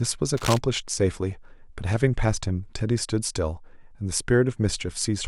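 A speech recording with a burst of cable scratch noise from 0.37 to 0.58 s, a dense, uneven rustle only about 5 dB below the speech, likely from a worn cable or connector being moved. A spectrogram shows broadband vertical smearing there, and the waveform shows jagged, irregular spikes.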